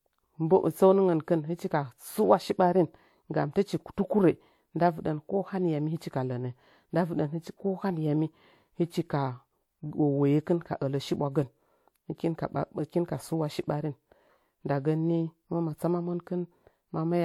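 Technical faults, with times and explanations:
Throughout, transcoding between lossy codecs: the speech carries two overlapping sets of coding artefacts. Spectral-replication texture, which fits a low-rate HE-AAC stage of around 48 kbit/s, sits under a second layer consistent with WMA at around 96 kbit/s. This is likely because the audio was encoded once and then re-encoded. The second encoder spends bits reproducing the first one's errors and adds its own, so both are heard together. Content extends to 20.1 kHz, the lowest cut-off in the chain.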